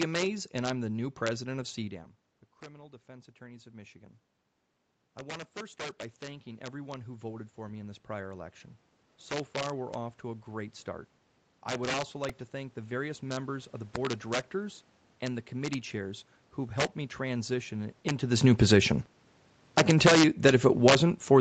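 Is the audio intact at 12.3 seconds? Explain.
No. At 12.29 s new audio arrived late, so the device replayed a tiny repeated buffer (about 1.45 ms, which fits a 64-sample buffer) four extra times, heard as a brief click-like buzz. Integer overflow also runs throughout: peaks driven about 5 dB past the limit wrap to the opposite sign, producing sharp cracks on the loudest moments.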